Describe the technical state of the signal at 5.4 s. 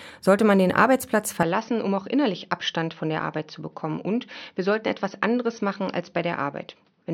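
At 5.4 s the sound is dull and band-limited, with nothing above 6.2 kHz. It is slightly quieter and carries a faint new noise floor. The input was likely switched to a poorer device at 1.43 s, with no gap at the change.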